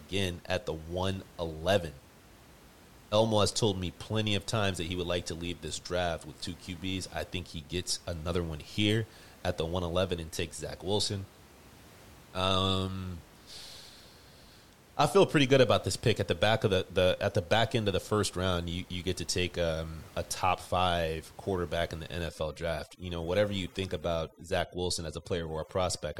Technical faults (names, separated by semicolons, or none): overdone noise removal